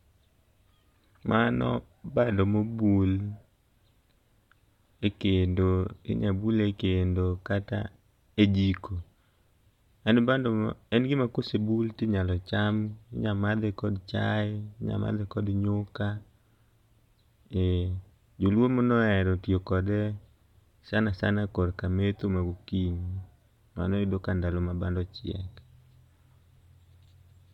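No technical faults are audible.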